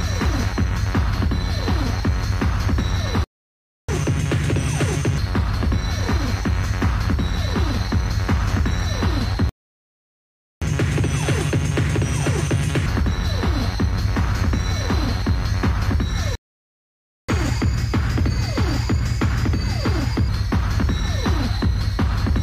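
The audio has three playback stalls, silences at 3.24–3.89, 9.49–10.62 and 16.35–17.29 s, likely from a starved buffer. Each picks up where it stopped, unlike a dropout that loses material. Each is followed by catch-up at higher speed, where speed and pitch jump together and then settle. The rise is 1.5 times, about seven semitones, at 3.89–5.18 and 10.62–12.86 s, and 1.15 times, about two semitones, at 17.29–20.29 s.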